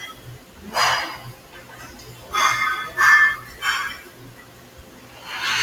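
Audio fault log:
throughout: noise suppressor applied to music or sounds. A speech-tuned suppressor keeps treating steady parts of the sound and its decays as noise, so the level swings by around 20 dB. Onsets pass while sustains and tails sink, giving a pumping, thinned character across the whole clip rather than isolated dips.
0.39–0.59 s, 1.36–1.54 s, 4.1–5.18 s: sound cut by the noise suppressor. Each stretch drops deeper than the surrounding gain riding, by about 5 dB in the first two brief spans and about 6 dB over the final one, which lasts about a second. The held or fading portion is pulled down and its decay shortened while sudden attacks still come through.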